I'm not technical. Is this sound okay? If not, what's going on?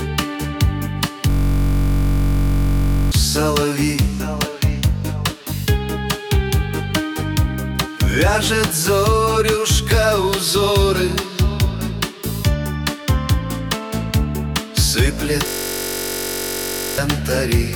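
No. A system hang loop hits from 1.30 to 3.12 s and from 15.47 to 16.98 s. The computer briefly froze while the sound hardware kept replaying the same 21 ms scrap, producing a steady buzz about 47 times per second. Roughly two seconds and one and a half seconds of real audio are lost.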